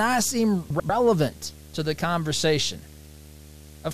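From the start, a video or display buzz runs under the speech. It sits at 75 Hz, the field rate of the picture, with a harsh hash of harmonics above it. A screen or its video cable is coupling into the audio path. The buzz stays steady for the whole clip. Its level is roughly 20 dB below the speech.

From 0.70 to 0.90 s, frames arrive out of order. Two neighbouring runs of frames were swapped before decoding. Each run lasts about 96 ms, which fits four frames per run. The two halves of this stretch play in exchanged order. The speech turns into a brief garbled flutter. No time is lost, so the speech carries on at the right place afterwards.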